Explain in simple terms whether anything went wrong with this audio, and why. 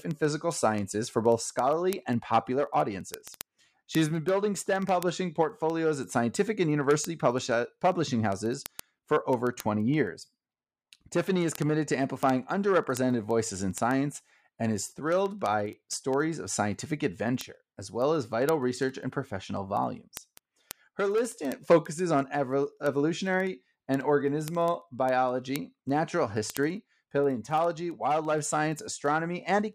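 Word clock ticks run through the whole speech clip, from 0.11 s to 29.73 s: hundreds of sharp clicks of uneven strength, roughly every 0.07 seconds. They come from a digital connection where the receiving device runs on its own clock instead of following the sender's. The two clocks differ by something like 300 parts per million, so they keep slipping apart, and at each slip a single sample is dropped or repeated, which produces a tick.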